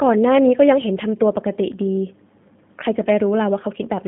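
From start to finish the speech carries the G.729 codec sound: a narrow line band of roughly 150 Hz to 3.6 kHz with nothing above 3.7 kHz, and a rough, synthetic grain from pulse-coded excitation. That grain, not just the missing top end, separates it from simple band-limiting, and points to about 8 kbit/s.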